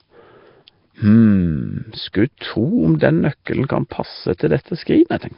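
From the start the speech sounds rough and hissy, smeared and underwater, with nothing above 5.3 kHz. That's heavy damage, likely Nellymoser compression at around 22 kbps. Then pre-echo shows up at 2.13 s, 2.99 to 3.01 s, 3.45 s and 4.38 to 4.40 s. Each time, block-spread quantisation noise puts a short hiss just ahead of a sharp attack and softens it.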